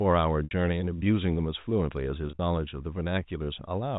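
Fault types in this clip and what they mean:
Packet loss with pitch repetition: chunks of the stream never arrived, so the receiver filled each gap by repeating the last pitch period. Around 0.44 s a 70 ms hole fades into silence before the speech returns, and from 2.27 to 2.39 s shorter scattered losses sound like brief, slightly held, buzzy notes.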